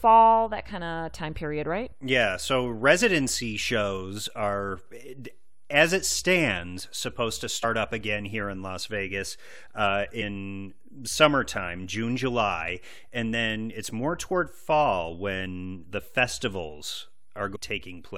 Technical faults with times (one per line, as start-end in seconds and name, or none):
7.63 damaged data in a compressed stream
10.21 damaged data in a compressed stream
17.54-17.57 damaged data in a compressed stream